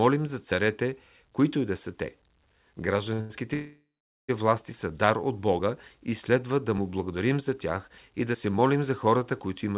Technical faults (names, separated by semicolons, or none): short stall from a late packet; call audio freeze